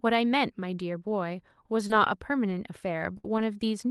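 At 1.87 s a brief smear blurs the speech for about 20 ms: a short concealed packet loss, where a packet never arrived and the receiver extended the preceding sound from its pitch or as shaped noise before blending back, so a small piece of the sound is simply gone.

From 1.90 to 1.92 s, and again at 2.50 to 2.52 s, the sound turns rougher and noisier for 20 ms each time. Each is a lost packet rebuilt from error correction: the next packet carried a low-bitrate Opus copy of the missing one, and the decoder played that coarser copy so no gap opens.

From 3.18 to 3.26 s the sound freezes into a held buzz or fading hiss, and about 60 ms of speech is missing when it resumes. This burst of packet loss came from consecutive packets lost or arriving too late, with the receiver stretching and attenuating the last sound across the hole. Its final 20 ms, 3.24 to 3.26 s, is again rebuilt from error correction and sounds grainier. 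One more rebuilt packet at 3.38 to 3.40 s adds the same brief roughness.

All of this rides on a call codec whose top end stops near 12 kHz, which fits Opus at around 32 kbps.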